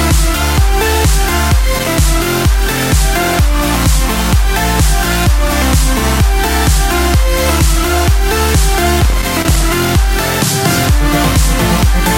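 Loose connector crackle appears at 1.79 to 1.88 s, then again from 9.01 to 9.90 s. A worn contact keeps making and breaking, chopping the sound into irregular scratchy bursts.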